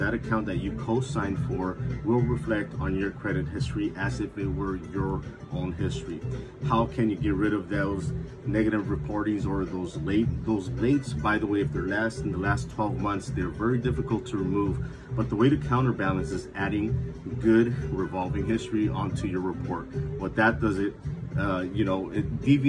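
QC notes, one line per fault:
No audible faults detected.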